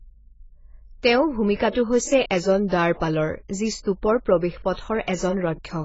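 AAC compression damage runs throughout this speech clip: nothing sounds above about 7.6 kHz, and sibilants turn fizzy and smeared, with a warbling edge on sustained sounds. This is likely heavy AAC-LC coding at a very low bitrate, around 16 kbps.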